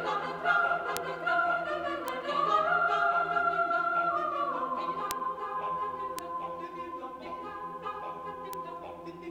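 You'll catch five isolated ticks, at 0.97, 2.08, 5.11, 6.19 and 8.53 s. Each is a bit error spike: a flipped bit knocks a sample or two off by a power of two, then it snaps back. The result is a sharp broadband click peaking around -6 or -12 dBFS, with no relation to the surrounding sound.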